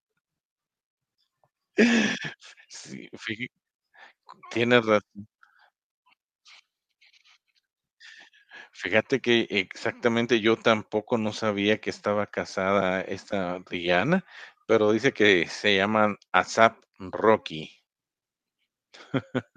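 At 13.31 s there's a brief dropout from lost LE Audio frames, lasting about 15 ms, which fits a pair of 7.5 ms LC3 frames going missing over the Bluetooth link. The decoder covers the gap by replaying the last spectrum with scrambled phase signs, so you get a quick grainy smear instead of a hard click. It's short enough that the fade-to-silence never kicks in. The light codec colouring around it is likely just the LC3 compression itself.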